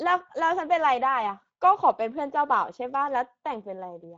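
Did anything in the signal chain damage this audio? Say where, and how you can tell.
Yes, at the codec stage: Speex coding throughout leaves the speech plainly hoarse and noisy, suggesting a mid-range bitrate; spectrograms show nothing above 7.8 kHz.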